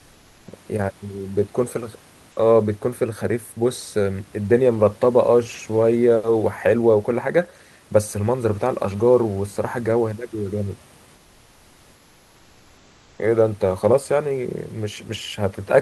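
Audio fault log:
11.14–13.18 s, comfort noise in place of the background: room hiss turns steady and featureless, about 2 dB quieter, never silent like a dropout; likely discontinuous transmission.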